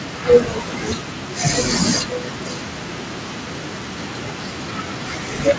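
Speech with an echo leak from 2.06 to 5.07 s: a faint, 504 ms delayed repeat returns, likely via a far-end loudspeaker the echo canceller missed, distinct from smooth room reverberation.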